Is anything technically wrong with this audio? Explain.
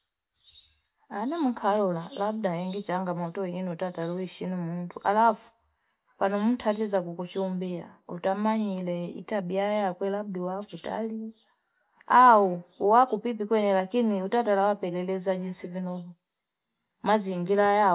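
No, the speech signal shows no technical faults that can be heard.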